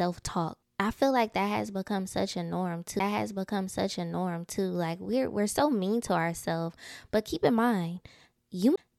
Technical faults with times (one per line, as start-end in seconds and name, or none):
2.99 CD skip
8.76 CD skip